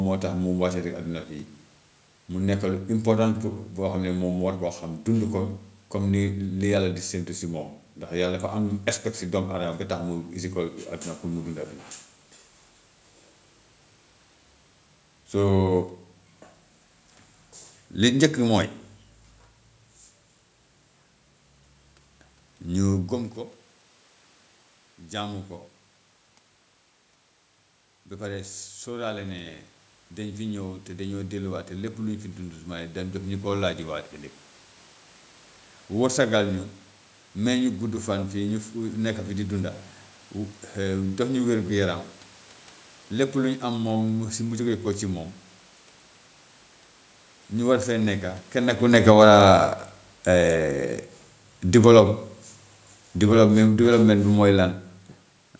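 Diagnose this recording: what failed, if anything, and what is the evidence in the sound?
The failure is automatic gain falling in the call processing. From 48.79 s to 54.74 s the speech sinks by about 7 dB, and the room noise sinks with it. The gain control judged the input too loud, or its background noise too strong, and lowered its gain gradually.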